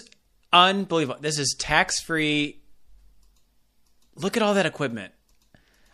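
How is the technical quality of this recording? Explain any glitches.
The recording has a clear, constant compression problem running through all of it. Across the whole clip the speech has a watery, swirly quality, with sibilants turning a bit metallic and chirpy and consonant attacks sounding smeared. That's most likely MP3 compression at a low rate, something around 64 kbps. Starved of bits, the encoder chops off the treble and lets weak frequency detail flicker in and out from frame to frame, which produces that unsteady, underwater texture.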